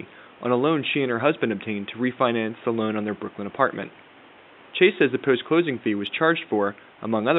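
No system faults are audible in the speech; the only background is room noise at about 28 dB below the talker, which belongs to the recording space rather than the signal chain.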